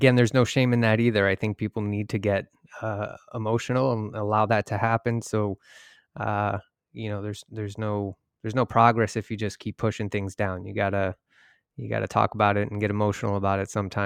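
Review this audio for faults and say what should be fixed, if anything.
Nothing needs fixing here: the speech signal shows no technical faults that call for correction.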